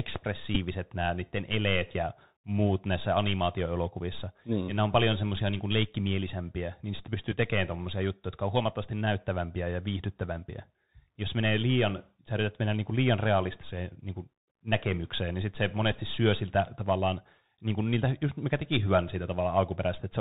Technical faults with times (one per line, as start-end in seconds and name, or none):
0.00-20.21 Bluetooth CVSD headset codec
0.55-0.58 Bluetooth headset packet repeated
7.32-7.37 Bluetooth headset packet repeated
15.92-15.96 Bluetooth headset packet repeated